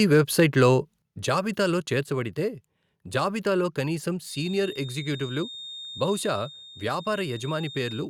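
Microphone overload from 0.13 to 0.65 s: peaks are pushed about 2 dB past the converter's limit, likely from excessive input gain, flattening a small fraction of samples into a harsh crackle on the loudest syllables.

Microphone volume stepped down at 1.02 s: speech and background drop abruptly by about 7 dB, likely the call software cutting the device's input gain in one step after that distortion.

Feedback whistle from 4.23 s to the end: a thin, steady 3.7 kHz tone wavers roughly 15 dB below the speech, likely a speaker-to-microphone loop sitting just short of runaway.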